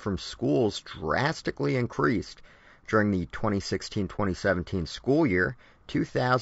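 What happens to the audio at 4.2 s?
Between 4.16 and 4.20 s the sound drops out briefly in an AAC frame loss with muting. About 30 ms of audio disappears, which fits a single lost frame whose spectrum the decoder set to zero. The overlapping windows fade the signal down and back up, so the gap has soft edges. On the waveform the envelope tapers smoothly to near zero and recovers without a spike. A spectrogram shows a narrow vertical band of silence across all frequencies, with blurred rather than sharp edges.

Around that gap, as throughout the clip, the speech is plainly rough and grainy, most likely from low-delay AAC compression of the AAC-ELD kind, at a rate that sounds like roughly 32 kbps. The low bitrate leaves too few bits to code the spectrum finely, so noise fills the spaces between the voice's harmonics. On a spectrogram the harmonic stripes look smeared, with speckled energy in the gaps between them.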